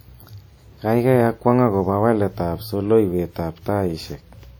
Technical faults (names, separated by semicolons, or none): WMA compression